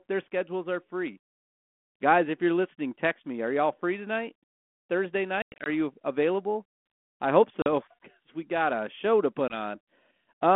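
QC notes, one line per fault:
5.42–5.69 s, 7.62–7.67 s, 9.48–9.55 s: packet loss on an ADPCM call. The holes are hard-edged silence, 160 ms (longest run 100 ms), then 40 and 20 ms. The decoder's predictor and step size then lag the sender's, so speech resumes with brief, slight distortion.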